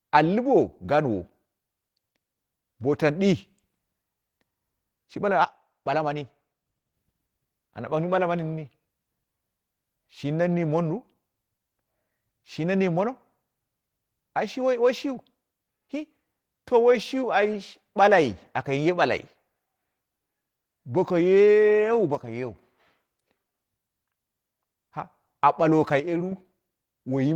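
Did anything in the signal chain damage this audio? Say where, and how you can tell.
Yes. Opus voice compression affects the whole clip at the codec stage: speech sounds hoarse and slightly robotic from coarsely coded excitation, which fits a hybrid mode at about 16 kbps.

One channel drops out at 5.44–6.94 s, 22.15–22.56 s and 26.00–26.32 s, where the level falls abruptly by about 6 dB, likely because one stereo channel was lost before the mono sum.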